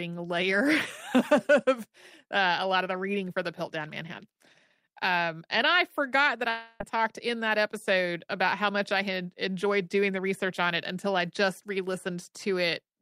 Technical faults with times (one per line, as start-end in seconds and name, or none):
6.49-6.81 long network dropout
8.73-10.27 jitter buffer speed-up